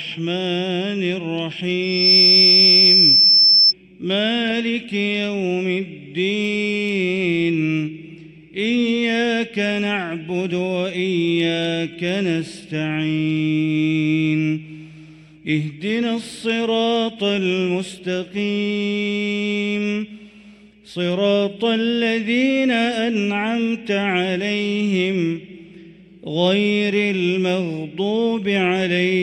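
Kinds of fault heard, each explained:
Loudspeaker feedback squeal: The microphone picks up its own loudspeaker, and the loop gain passes one at a single pitch. A 5.3 kHz tone swells up in about a third of a second from 1.82 s. It sits roughly 10 dB over the sound and stops at 3.73 s.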